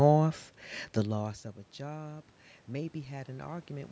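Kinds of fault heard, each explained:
Automatic gain rising: when the input falls by about 18 dB near 1.0 s as the talker moves away, the gain control lifts everything by about 5 dB from 0.95 s onward. Speech and room noise swell together, and the waveform envelope and spectrogram noise floor brighten gradually.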